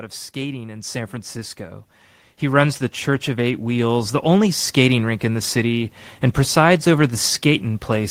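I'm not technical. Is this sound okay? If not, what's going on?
No. From 0.33 to 4.51 seconds there's automatic gain rising: the recording's automatic level control decided the input was too quiet and slowly turned itself up, leveling off just before "skating rink in the". Unlike someone moving closer to the microphone, the background noise swells right along with the speech.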